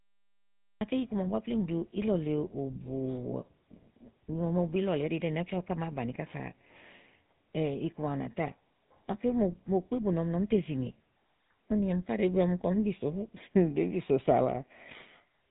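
Speech clip with two faults. The first is a cut-off start: digital silence runs from 0.0 to 0.81 s, then the audio begins abruptly in the middle of a sound with no natural attack, because the recording or stream started late and caught the speech already under way. The second, present throughout, is the GSM full-rate codec. It models the vocal tract and excites it with sparse, regularly spaced pulses, which leaves the voice plainly buzzy and gravelly. The codec passes nothing above 3.8 kHz, and the degree of damage fits a 13 kbps stream.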